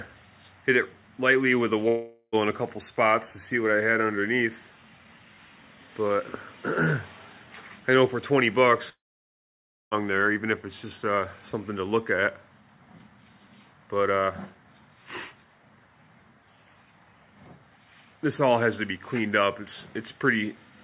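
At 1.88 s and again from 8.89 to 9.94 s the sound breaks off into a fading buzz, likely a long network dropout. The first gap lasts about 0.45 s. The second decays to near-silence for about 1 s. Unlike a short packet-loss glitch, the audio resumes further on with the missing stretch simply gone.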